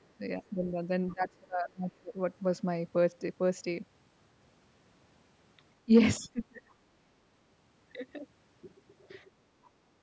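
A speech recording where the talker keeps getting ducked: at 0.39 to 0.81 s the level sags by about 10 dB, then 1.14 to 2.15 s drops by about 30 dB, 5.85 to 5.92 s by about 20 dB, and 6.19 to 6.62 s by about 30 dB again. That's speech suppressed in double talk, most likely an echo canceller unable to separate the near voice from far-end echo and squashing both. Right at the end, 9.65 to 9.69 s, there's a faint blip of the other side's voice leaking through, roughly 35 dB under the speech.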